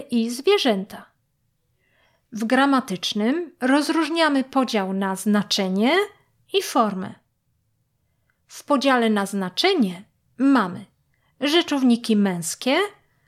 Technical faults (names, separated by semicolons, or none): none